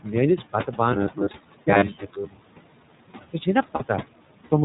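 Throughout the clip, noise suppressor artifacts are present. The suppressor pulls down whatever bands it judges to be steady noise by about 18 dB. The room noise, which sits about 17 dB below the speech, therefore dips in the pauses and comes back up under the talking. What is left of it has a fluttering, warbling texture, and the speech takes on a thin, slightly watery quality where the suppressor is working hardest.

The whole clip also carries the sound of the iLBC codec. Nothing above 4 kHz survives, so the speech is band-limited to telephone width. The coding damage is plainly audible as a rough, somewhat synthetic edge on every syllable. The behaviour fits iLBC's 15.2 kbps mode with 20 ms frames, each frame coded on its own.

From 0.37 to 0.79 s, speech is cut by the noise suppressor. Parts of the speech were mistaken for noise and turned down with the background, by up to about 12 dB. 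Roughly a sixth of a second in total is affected, scattered through that span. Soft consonants and word edges there sound swallowed and faint rather than missing outright.

From 0.93 to 3.06 s, the speech turns into a rigid, metallic buzz at 100 Hz that still loosely tracks the syllables. This is robotic sound from repeated short buffers. New audio was likely arriving too seldom, so the playback side kept repeating the last 10 ms chunk, whose length sets the 100 Hz pitch. That happened for most of this stretch, and much of the real audio was skipped.

Inside that stretch, at 1.32 to 1.35 s, a lost iLBC frame shows up as a brief 20 ms held, buzzy vowel-like sound. This fits one missing 20 ms frame being concealed by repeating the last pitch cycle with added noise. The speech recovers immediately afterwards.

Speech is cut by the noise suppressor again from 1.90 to 2.35 s, this time more deeply, by up to about 18 dB. 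Again roughly a sixth of a second in total is pulled down with the background. Quiet parts of the speech sound swallowed and faint.

At 3.76 to 3.82 s, there are more lost iLBC frames, a 40 ms gap consistent with two consecutive frames. The decoder fills it with a sustained, breathy, slightly buzzy tone. Since each iLBC frame decodes independently, the speech is back to normal right after the gap.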